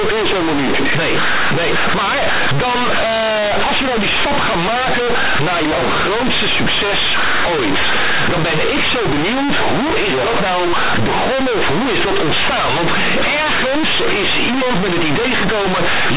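Speech runs the whole 16 s as harsh, buzzy distortion: companded audio read as linear, with mu-law bytes played as plain 8-bit samples and never expanded. Unlike ordinary clipping, the pauses blare with loud noise and quiet passages come out as loud as emphatic ones.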